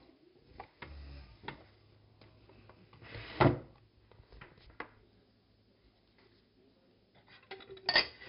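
The whole clip has passed through 4-bit ADPCM compression. Each sample is coded as a coarse 4-bit step from a predicted value, and the step size adapts too slowly to track the waveform exactly. The damage is heavy: a gritty hiss rides on every loud passage and rises and falls with the level, and sharp attacks come out roughened. Nothing reaches above 5.3 kHz, so the sound is dull, which points to a low sample rate of around 11 kHz.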